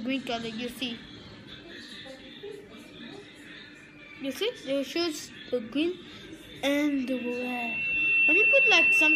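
The audio has loudspeaker feedback squeal from 6.88 s to the end at 9.15 s. A microphone is picking up its own loudspeaker. At 2.7 kHz the loop gain exceeds one. That tone swells over about a second and a half and ends about 10 dB above the sound.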